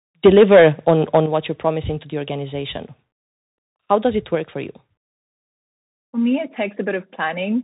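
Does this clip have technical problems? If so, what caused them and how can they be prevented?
Yes. The speech is narrowband throughout, with nothing above 3.8 kHz, plus granular hiss, scratchy s sounds and distortion on loud high content. This is the Bluetooth CVSD headset codec. Its one-bit up/down stream, which fits a 64 kbps link, cannot follow fast loud changes. Prevention: use a headset and app supporting the wideband mSBC mode, or a wired microphone.

From 0.25 to 1.18 s the loudest syllables have a harsh, crackling edge. Peaks run about 7 dB past full scale, and around 7 percent of samples are flattened. The likely cause is microphone overload: input gain set so high that the converter's ceiling cuts off waveform tops. Prevention: lower the input level until peaks sit well below full scale.

The level drops abruptly by about 3 dB at 0.26 s and by about 8 dB at 1.26 s. Voice and background fall together, which points to the likely cause: the microphone volume being stepped down automatically by call software reacting to the overload. 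Prevention: set a correct input level beforehand so automatic gain control has nothing to correct.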